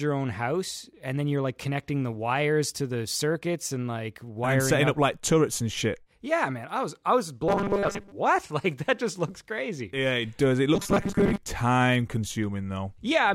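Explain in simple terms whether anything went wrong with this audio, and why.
Twice the speech turns into a stiff, metallic buzz, from 7.48 to 8.12 s and again from 10.75 to 11.38 s. It still loosely follows the talking, but with a flat, machine-like tone. This is robotic sound from repeated short buffers, likely because new audio arrived too slowly and the system kept replaying its last tiny slice. The buzz sits at 200 Hz, which fits a 5 ms slice. Most of the first stretch and about half the second were filled this way.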